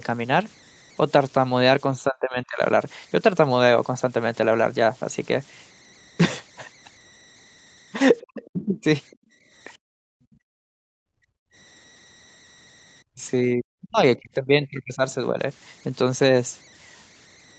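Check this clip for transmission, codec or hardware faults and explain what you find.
Four kinds of fault are audible in this speech clip.

Converter idle tones run throughout. A faint whistle near 2 kHz sits about 28 dB below the speech. An undithered delta-sigma converter falls into repeating bit patterns at low levels.

Speech suppressed in double talk occurs at 2.02–2.61 s, 8.24–8.85 s and 13.14–15.39 s. The speech dips sharply, by roughly 25 to 40 dB. The likely cause is an echo canceller turning everything down while both sides talk.

The other side's voice leaking through appears at 8.21–8.50 s and at 9.11 s. A second, much quieter voice is heard. This is likely loudspeaker sound that the echo canceller failed to remove.

Background gated by the echo canceller occurs at 9.16–9.45 s and 9.77–11.55 s. The room sound drops by about 26 dB, then by about 40 dB. The canceller clamped the microphone while the loudspeaker played.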